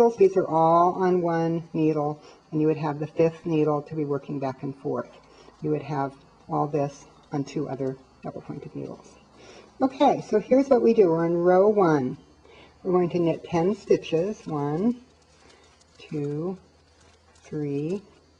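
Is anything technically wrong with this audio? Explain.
No, nothing technically wrong can be heard in this audio. No working path is identified beyond the sound itself, so there is nothing further to point to.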